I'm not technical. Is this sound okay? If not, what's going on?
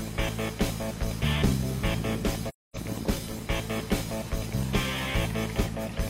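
No. At 2.48 s, several chunks of the compressed audio went missing, and the player filled the gap with silence. This is AAC frame loss with muting: the sound fades out gently and fades back in at 2.77 s, leaving a soft quarter-second hole.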